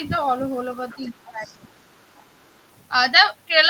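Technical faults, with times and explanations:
0.89–1.10 s, 1.45–1.54 s and 2.15–2.25 s: other side's voice leaking through. Three brief scraps of a second, fainter voice sit under the main speech, at around 25 dB, 30 dB and 35 dB below it respectively, each fainter than the last. This is likely residual echo: the far end's audio played from the talker's loudspeaker reaches the microphone, and the echo canceller leaves part of it in the outgoing signal.
0.95–1.86 s: speech suppressed in double talk. The main speech is pulled down in level by up to around 20 dB, with the dips adding up to roughly 0.7 s across this span. They overlap the leaked voice at 0.89–1.10 s and 1.45–1.54 s. The likely cause is that both sides talked at once and the echo canceller, unable to tell the near-end speech from the loudspeaker echo, attenuated everything.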